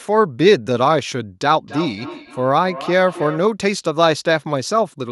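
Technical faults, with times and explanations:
1.57–3.54 s, feedback echo between two devices: the speech comes back at a steady gap of roughly a third of a second, peaking at about 14 dB below the direct sound. That spacing is the round trip through a second device in the same room. It plays the call out loud, and the first device's microphone picks it up again. Each device's echo canceller only removes its own playback, so this loop gets through.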